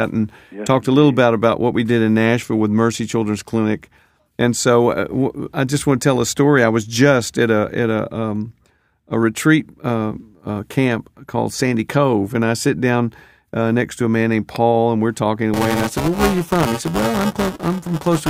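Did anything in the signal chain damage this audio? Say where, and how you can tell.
Yes. Buffer tearing at the driver or buffer stage starts at 15.53 s, just after "and we're talking", and runs to the end of the clip at 18.30 s. A rattling, robotic buzz at 345 Hz sits on the speech only while sound is present, which fits a 128-sample buffer. The writing program and the hardware reader have slipped out of step, so roughly a fifth of every period replays audio from about 5 ms earlier, with hard joins on both sides.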